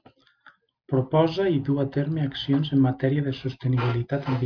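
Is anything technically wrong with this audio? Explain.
No, nothing technically wrong turns up anywhere in this bit of speech.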